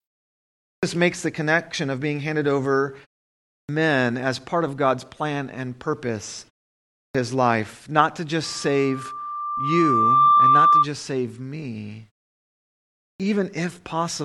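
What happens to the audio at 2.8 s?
Nothing goes wrong at 2.8 s: the speech there plays through intact, with no dropout, click or distortion at that moment.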